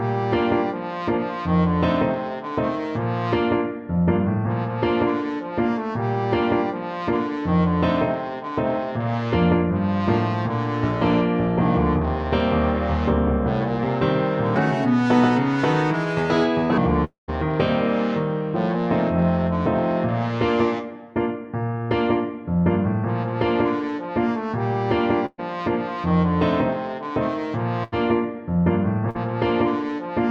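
From 14.56 to 16.78 s the audio turns high and hurried, running about 1.41 times too fast and sitting roughly seven semitones sharp. This is a section at the wrong speed, most likely a stretch played against the wrong clock, so pitch and tempo rose together.

Just after, from 17.04 to 17.30 s, the sound gives way to a fading buzz or hiss that thins into silence for around 150 ms before the audio resumes further on. This is a long network dropout. About 240 ms never arrived, likely lost in transit, and the receiver extended the last sound to cover the gap until that ran out.

At 25.26 to 25.40 s and again at 27.84 to 27.94 s, the last sound is held and dims, and then the audio jumps ahead. These are bursts of packet loss, about 120 ms and 80 ms of audio missing. In the first, the concealment fades to roughly 30 ms of silence before the audio resumes.

From 29.10 to 29.16 s there is a brief smear, a quick wobble where the sound blurs for an instant. 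This is short concealed packet loss: about 40 ms failed to reach the decoder in time, and the receiver stretched the preceding sound across the hole before blending back.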